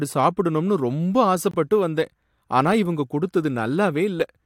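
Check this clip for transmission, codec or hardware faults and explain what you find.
One transmission fault is audible: a corrupt frame muted in the speech at 1.51 to 1.55 s. The decoder rejected a damaged compressed frame, and the player substituted silence rather than play garbage, so the sound drops out abruptly for about 34 ms, which fits a single lost frame, and then resumes on time. On a waveform it shows as a flat near-silent run with sharp edges; on a spectrogram, a clean vertical gap across all frequencies.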